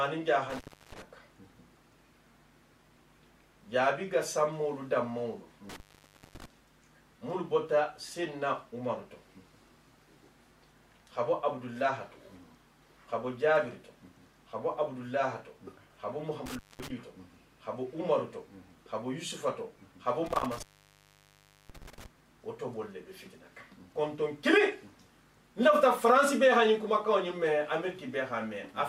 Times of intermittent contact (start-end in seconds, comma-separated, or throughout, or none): 0.50-1.02, 5.69-6.45, 16.46-16.90, 20.26-22.06